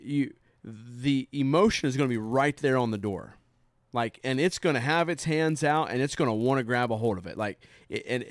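From 1.84 s, just after "you the", to the end, the speech carries a steady 100 Hz buzz from a resampler restarted on every block. Each 10 ms block was converted from 48 kHz to 24 kHz in isolation, leaving an edge error at every boundary.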